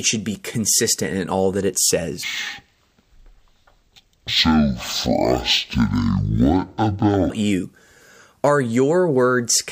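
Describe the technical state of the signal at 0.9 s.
Around 0.9 s the speech signal is intact, with no audible fault at that moment.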